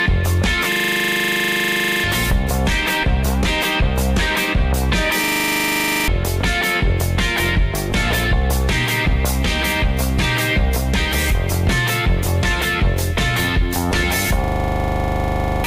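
A system hang loop occurs three times, at 0.72 to 2.04 s, 5.24 to 6.08 s and 14.44 to 15.64 s. The machine stalled while the hardware kept replaying one 40 ms slice of its buffer, producing a steady 25 Hz buzz and losing roughly 1.5 s, 1 s and 1 s of audio respectively.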